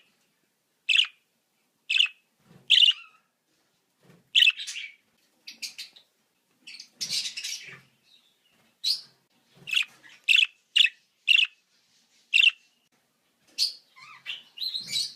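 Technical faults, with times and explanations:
No technical faults detected.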